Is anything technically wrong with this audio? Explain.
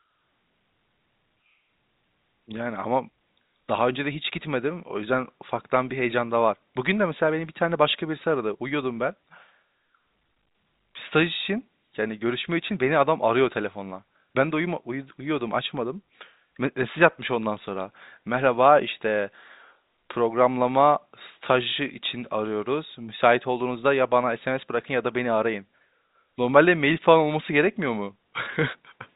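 No, nothing is technically wrong with this audio; it is speech carried over G.711 telephone coding, with nothing above about 3.8 kHz.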